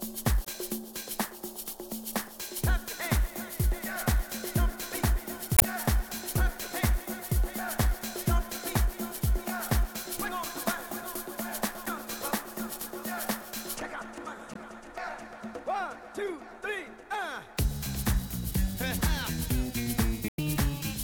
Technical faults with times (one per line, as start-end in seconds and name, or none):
0.43-0.49 damaged data in a compressed stream
5.55-5.63 damaged data in a compressed stream
11.86 damaged data in a compressed stream
14.52-14.58 damaged data in a compressed stream
20.27-20.39 damaged data in a compressed stream